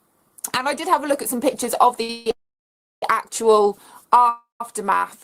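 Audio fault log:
2.02–2.10 s, short stall from a late packet: the last sound is held for about 65 ms with a slight buzz or dip, then resumes at the same point.
2.10–2.27 s, 2.31–3.03 s, 4.29–4.61 s, call audio freeze: playback halts and the held sound fades. The first hold lasts 159 ms with no silence. The second runs 712 ms and is silent for about 680 ms. The third runs 311 ms and is silent for about 140 ms. Each time the audio picks up where it stopped, adding delay but losing nothing. The likely cause is packets held up in transit that emptied the jitter buffer.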